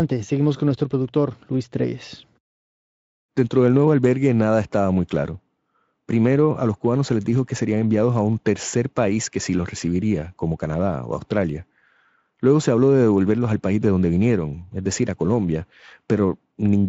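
No technical faults are audible.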